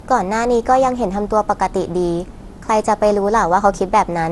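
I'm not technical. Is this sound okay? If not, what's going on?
No. The speech sounds swirly, smeared and hollow from start to finish, with the starts of sounds blurred and nothing above 11.8 kHz. This is likely generation loss: the audio was squeezed with a lossy format and re-saved around ten times, each pass adding fresh damage on a slightly different grid. A single poor-quality save would sound thin or muffled, but not this swirly and hollow.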